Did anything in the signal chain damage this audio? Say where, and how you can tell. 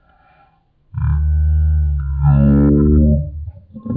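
Yes. The damage is at the playback stage, as a wrong sample rate, and it runs through the whole clip. The speech is slowed to about a third of normal speed and pitched down by 19 semitones, with tempo and pitch falling together. That locked pairing shows the samples were clocked out too slowly with no rate conversion, which fits 48 kHz material being played at 16 kHz.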